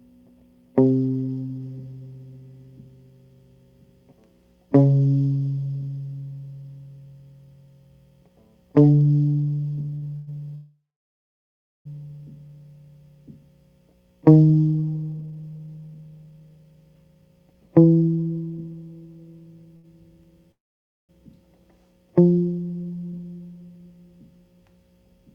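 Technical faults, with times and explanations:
9.95–10.04 s and 19.77–19.86 s, short stall from a late packet: the music hangs on its current sound for 68 ms and then 73 ms, with a slight buzz or dip, before carrying on from the same place. A packet arrived late, the jitter buffer ran dry, and the receiver stretched the last sound to cover the wait. Nothing is lost.
10.16–10.29 s, 10.55–11.87 s and 20.52–21.11 s, call audio freeze: the music stops moving and the last sound is held as a fading buzz or hiss. The first freeze lasts 109 ms with no silence. The second lasts 1.3 s and about 1.04 s of it is silent. The third lasts 571 ms and 540 ms of it is silent. Playback then resumes where it stopped. This is likely packets held up in transit, which emptied the jitter buffer.
15.10–18.58 s, jitter buffer speed-up: the music runs about 19 percent fast at unchanged pitch and sounds hurried, with an unsteady tempo. 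After the earlier delays the buffer held too much audio, so the receiver trimmed many tiny pitch-period slices, roughly 0.7 s in total, to catch up.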